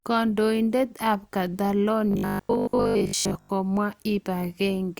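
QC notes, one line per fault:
2.11–3.49 s: robotic sound from repeated short buffers; speech becomes a metallic 50 Hz buzz, likely a 20 ms buffer repeating while most audio is skipped.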